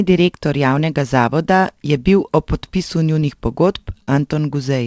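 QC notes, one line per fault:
3.20–3.23 s and 4.03–4.09 s, short concealed packet loss: about 20 ms, then about 40 ms, of the call audio reached the decoder too late. The receiver bridged each hole by extending the preceding sound and then blended back into the real signal, so each spot comes across as a brief smear or wobble. On a spectrogram, each patch appears as a short, unnaturally steady stretch below the 8 kHz ceiling of the G.722 call path. In the waveform, it shows as an overly regular stretch.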